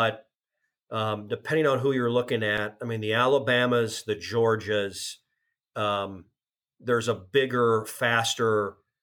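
A speech clip with one block of digital silence at 2.58 s, after "on who you're looking" and before "I mean the". The program most likely missed filling its output buffer in time, so about 1.45 ms of samples, which fits a 64-sample block, dropped out without a fade, heard as a tick or dip.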